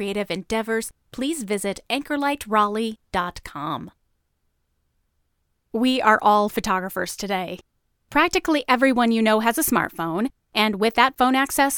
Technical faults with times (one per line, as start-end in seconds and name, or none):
none